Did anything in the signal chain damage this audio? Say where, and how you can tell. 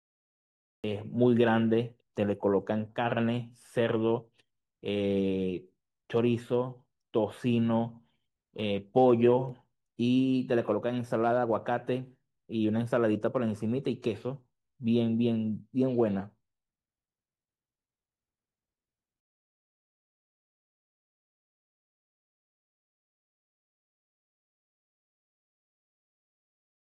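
Yes. There is a cut-off start at the head of the speech: digital silence runs from 0.0 to 0.84 s, and the sound then appears abruptly at 0.84 s, already in progress, with no natural onset or fade-in. This points to the capture or stream starting late, at the recording or storage stage, so the first moment of the utterance was never written and the waveform begins mid-sound instead of building up from its attack.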